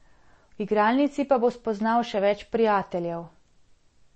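MP3 compression artefacts run through the whole speech clip, from start to finish, and the likely cause is a low-bitrate MP3 encode. Nothing is heard above 8.3 kHz, which fits a bitrate around 32 kbps, where the encoder cuts the top band entirely and drops quieter frequency lines that then flicker on and off between frames. The damage is plainly audible: sibilants lose their crispness, the voice takes on a watery, swirling texture, and consonant onsets sound smeared.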